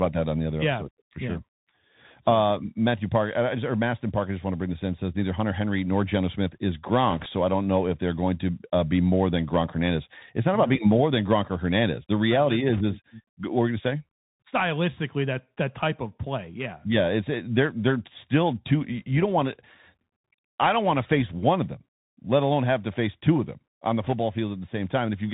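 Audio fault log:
Throughout: Bluetooth CVSD headset codec. The speech is squeezed into a narrowband one-bit delta stream, which fits a 64 kbps link. Nothing gets above 4 kHz, the s sounds come out scratchy, loud bright moments overload the adaptive step, and a grainy hiss sits underneath.
7.10–7.26 s, 12.73–12.82 s, 24.03–24.13 s: bit errors on a Bluetooth voice link. Short bursts of rushing, crackly noise spread over the speech, with roughly one or two percent of bits flipped. Each CVSD bit carries only a small step and the errors fade quickly, so there are no sharp clicks.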